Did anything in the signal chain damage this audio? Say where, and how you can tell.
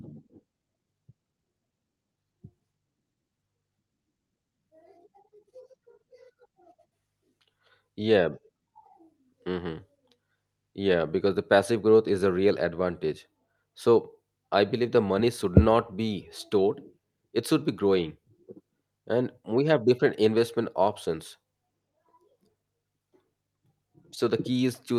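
No, no faults found.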